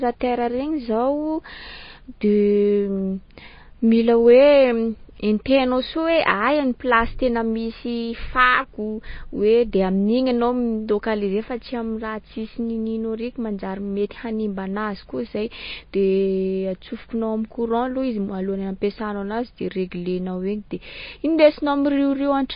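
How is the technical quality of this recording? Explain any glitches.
Technical quality is poor, with audible codec damage running the whole way through. It's likely MP3 compression at a very low bitrate, something like 24 kbps. Nothing survives above about 5.1 kHz, so the speech sounds dull. The encoder is dropping weak frequency lines frame by frame, which leaves a watery, swirly texture, metallic chirps on s sounds, and smeared consonant attacks.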